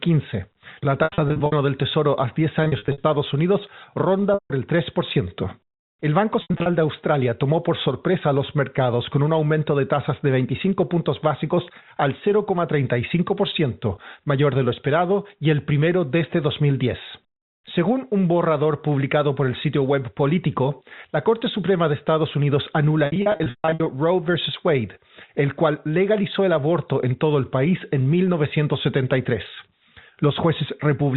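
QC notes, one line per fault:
1.04–1.52 s, 2.64–3.04 s, 4.34–4.50 s, 6.42–6.66 s, 23.06–23.86 s: packet loss with pitch repetition. The receiver loops the last pitch period over the missing audio, which sounds like a held, buzzy tone. The 4.34 s gap and the runs up to 140 ms at 23.06 s fade to silence after about 50 ms, then cross-fade back. The telephone band limit from the G.711 coding is audible underneath.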